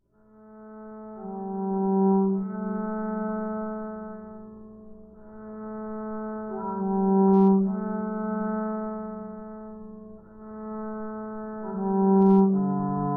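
Nothing stood out as a technical fault when listening to these everyday sounds.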